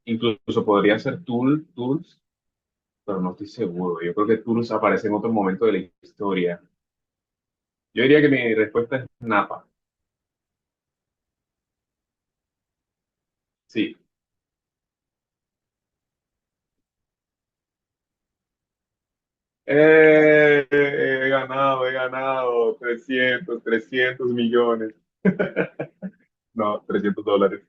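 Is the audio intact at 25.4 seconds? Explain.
No, there are compressed frames skipped from 25.41 to 25.46 s: roughly one 20 ms frame never gets decoded, so the speech jumps ahead by about 20 ms.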